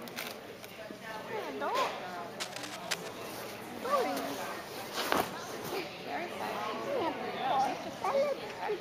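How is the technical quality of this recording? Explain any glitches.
One glitch stands out. From 2.40 to 3.09 s there is cable scratch noise, a dense, uneven rustling sitting only slightly below the sound. It is likely caused by a worn cable or connector being moved, its contact resistance flickering rapidly. Unlike isolated digital clicks, it is a continuous, irregular scratchy texture.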